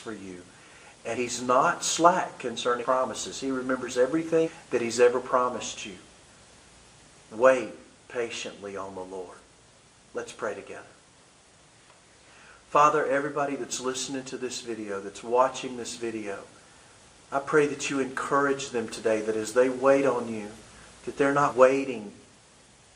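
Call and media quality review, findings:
Compressed frames skipped at 1.14 s, 2.81 s, 4.44 s and 21.48 s. Audio jumps forward. Decoder side: whole frames missing or rejected as damaged. Jumps fit a frame length of about 46 ms. Roughly 100 ms lost at 1.14 s and 21.48 s, a couple of frames each. Around 200 ms lost at 2.81 s and 4.44 s, about five frames each.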